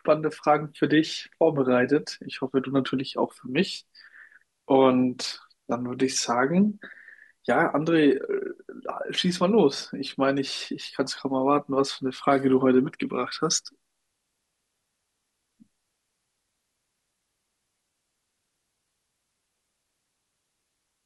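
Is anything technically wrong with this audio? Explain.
No, nothing technically wrong.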